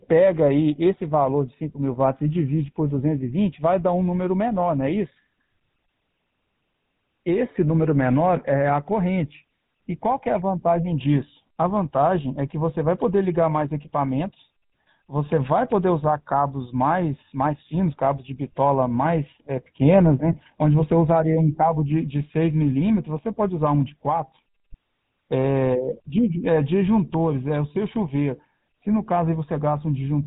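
GSM full-rate codec damage runs through the whole of this speech recording. The codec rebuilds the voice from a vocal-tract model fed by regularly spaced pulses and cuts everything above 4 kHz. The result is a plainly audible buzzy, gravelly roughness, consistent with 13 kbps GSM.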